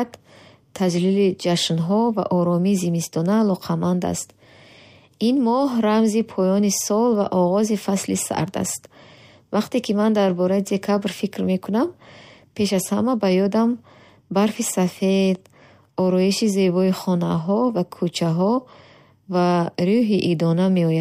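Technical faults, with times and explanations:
Nothing here needs flagging; there's simply no technical trouble to point to anywhere in this recording.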